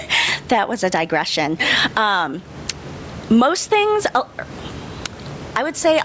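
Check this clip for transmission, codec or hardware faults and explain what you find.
Gain pumping runs through the whole speech clip: the room noise sits about 32 dB below the speech, and the gain swings by roughly 15 dB under each loud syllable, squashing loud and soft parts together. The likely cause is microphone gain set far too high, with a fast limiter repeatedly clamping it. Unlike a noise gate, the background never cuts to silence. The call's microphone processing, with nothing above 8 kHz, is expected for a call and is not part of the fault.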